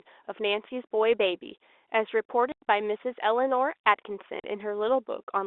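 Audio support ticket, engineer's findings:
Packet loss filled with silence. Network dropped consecutive packets; receiver inserted silence instead of concealing. Gap at 2.52–2.62 s, 100 ms dead air, which fits five 20 ms packets lost in a row. Second gap at 4.40–4.44 s, 40 ms, consistent with two packets. Hard edges at both ends of each hole; speech is abruptly chopped. Band-limited telephone sound from the G.711 line is audible throughout.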